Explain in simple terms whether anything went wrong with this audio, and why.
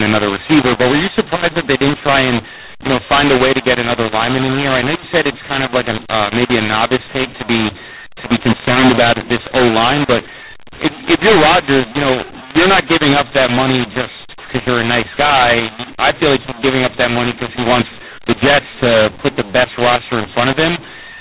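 Something did go wrong, from start to finish: a mu-law and A-law mix-up. The speech was stored as mu-law telephone audio but played back as A-law, so loud and soft parts get scrambled, the voice turns harsh and gritty, and the pauses fill with hiss.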